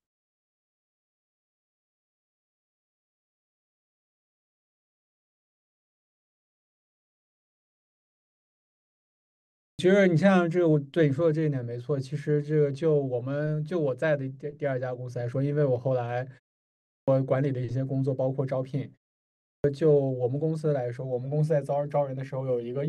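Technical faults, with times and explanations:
9.43–9.79 s, 16.67–17.08 s and 19.26–19.64 s: clipped start after a pause. Speech bursts out of silence with its opening gone, losing 0.36 s, 0.41 s and 0.38 s. The output device sleeps in silence and wakes too late, even after gaps under 0.4 s.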